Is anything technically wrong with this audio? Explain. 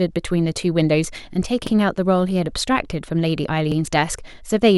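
Yes. The speech has overlapping chunks: at 1.67 to 1.72 s and again at 3.72 to 3.77 s, about 50 ms of audio plays twice. The signal was handled in 2-second blocks, and each block began before the previous one ended, so the seam repeats a sliver. The result is a brief stutter or click. Unlike a dropout, nothing is missing, and unlike random glitches, the repeats fall 2.05 s apart.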